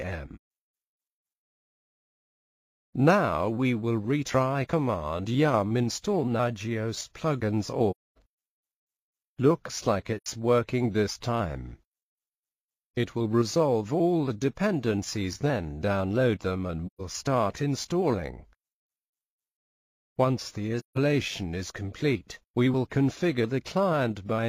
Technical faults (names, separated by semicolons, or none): AAC frame loss with muting